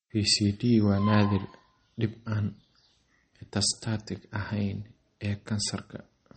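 Across the whole speech clip the treble stops dead at 8.4 kHz, and the remaining sound has a watery, swirling quality with chirpy, metallic s sounds and softened consonant attacks. That is plainly audible damage, likely from MP3 compression at a low bitrate, consistent with about 32 kbps. On a spectrogram there is a flat ceiling at 8.4 kHz, with weak components below it flickering on and off in blocky patches from frame to frame.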